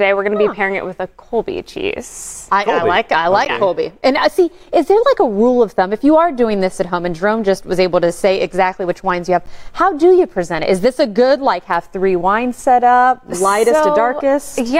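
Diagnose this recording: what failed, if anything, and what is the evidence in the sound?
The failure is a gap between chunks at the storage or playback stage. Short hard-edged holes of about 13 ms occur at 3.45 s and 9.46 s, about 6 s apart. The audio was handled in 6 s chunks, and silence was inserted at each join without losing any sound.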